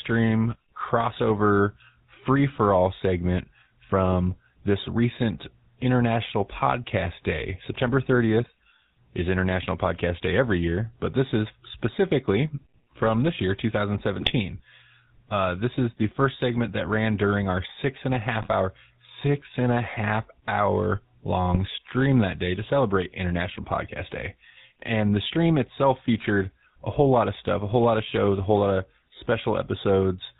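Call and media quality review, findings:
GSM full-rate codec, whole clip: buzzy, gravelly roughness on speech, band-limited to 4 kHz, plainly audible. The sound fits 13 kbps GSM full rate, with pulse-excited vocal-tract modelling. Unlike AMR or narrowband PCM, the roughness is a steady grating buzz, not smearing or hiss.

GSM bit errors, 14.2–14.31 s, 18.31–18.52 s (after "our six and a", before "six and a half"), and 21.50–21.57 s (after "and a half hour", before "stream that day to"): squawks, pops and gargling. Corrupted filter, pitch and gain parameters distort the spectrum or spike the level per frame. Packet-loss concealment would mute or repeat audio rather than squawk.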